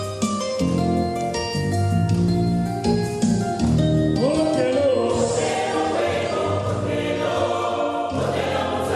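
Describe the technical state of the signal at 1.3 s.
At 1.3 s the signal is intact, with no audible fault at that point.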